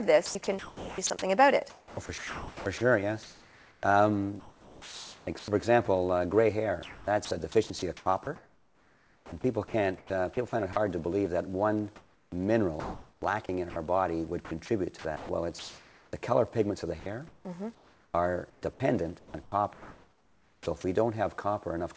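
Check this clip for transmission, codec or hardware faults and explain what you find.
Yes, there's one recurring fault: sound chopped by the voice detector, in seven stretches at 0.26–3.83, 4.40–5.48, 6.83–10.76, 11.96–13.76, 14.45–16.13, 17.00–18.62 and 19.19–20.66 s. Within each stretch, between roughly 0.75 and 2 s of the real sound drops out and is replaced by a synthetic hiss. The likely cause is the sender's voice activity detection flipping on and off and filling the gaps with comfort noise. You hear choppy, clipped edges. The call path underneath caps everything at about 8 kHz, which points to a G.722-style wideband codec.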